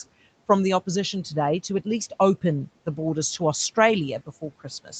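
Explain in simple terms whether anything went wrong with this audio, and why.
One thing went wrong, right at the very end. From 4.84 to 4.93 seconds, the noise suppressor cut into the speech. It mistook a quiet bit of speech for background noise and turned it down with the room noise. It lasts only about a tenth of a second. The sound there seems swallowed and faint. The room noise stays well below the speech, and the call line's top end stops at 8 kHz, which is normal for this kind of call.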